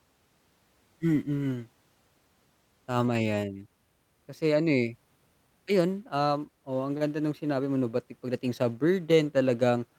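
No technical faults can be heard anywhere in the recording.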